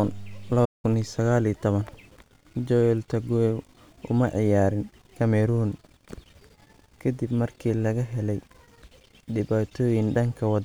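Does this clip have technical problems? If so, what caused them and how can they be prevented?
Yes. A playback stall cuts the speech to full silence from 0.65 to 0.85 s, about 185 ms. The likely cause is the player's buffer running dry or its thread blocking. Unlike codec dropouts, the gap is clean silence, not a garble or click. Larger playback buffers and keeping heavy work off the audio thread prevent it.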